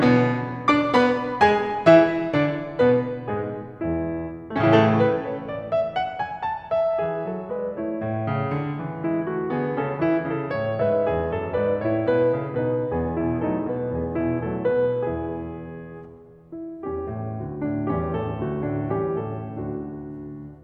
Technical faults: none

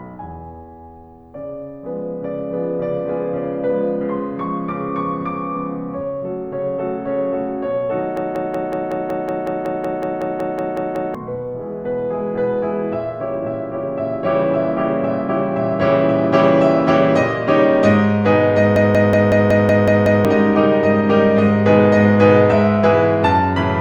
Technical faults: system hang loop

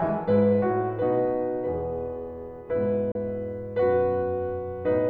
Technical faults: digital broadcast dropout

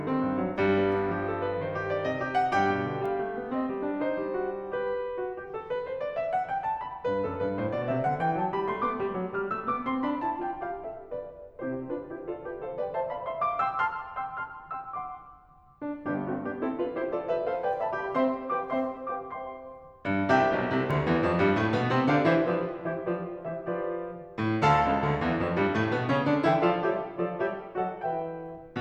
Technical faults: bit error spike

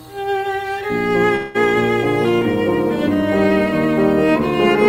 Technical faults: call audio freeze

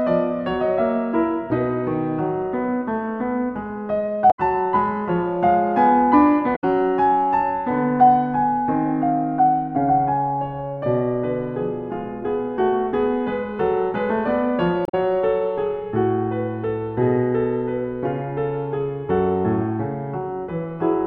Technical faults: damaged data in a compressed stream

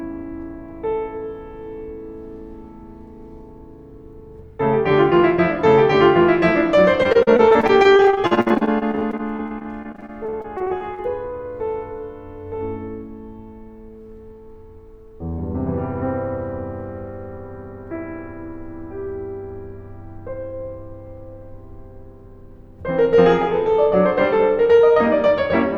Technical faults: repeated packet loss (robotic sound)

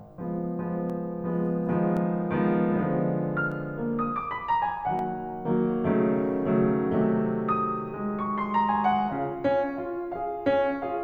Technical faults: dropped samples

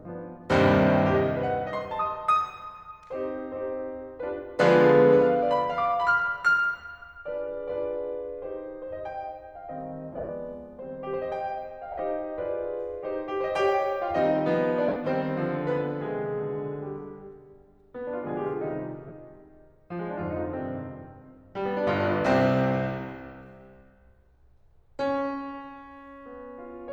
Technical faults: lost LE Audio frames

